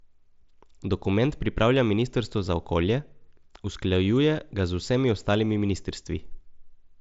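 Nothing stood out on listening to this speech clip, which comes through a wideband Bluetooth headset link with nothing above about 7.7 kHz.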